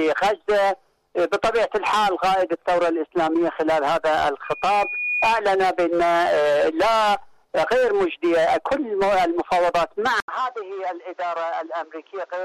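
A microphone picking up its own loudspeaker causes loudspeaker feedback squeal from 4.44 to 5.39 s, a 2.5 kHz tone swelling over under a second to roughly the level of the sound.

At 10.20 s the input was likely switched to a poorer device. After an 80 ms gap, the sound is duller with nothing above 7.6 kHz, about 5 dB quieter, and carries new background noise.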